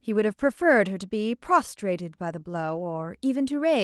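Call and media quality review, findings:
Lost packets rebuilt from error correction, 2.75–2.81 s: in-band FEC copies of two packets played, about 40 ms. No gap, but that stretch of speech sounds rougher and noisier. Opus call path, band limited near 12 kHz.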